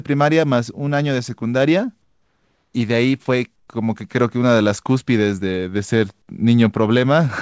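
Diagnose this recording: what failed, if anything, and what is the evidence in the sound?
Comfort noise in place of the background at 2.02–2.74 s and 3.56–3.68 s, in call processing. The faint room tone turns into flat, featureless hiss, about 4 dB and 6 dB quieter. This is likely discontinuous transmission halting, with the receiver synthesising filler noise.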